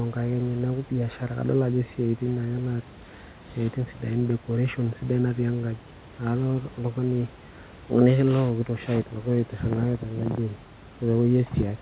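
No technical faults can be heard anywhere in this speech recording.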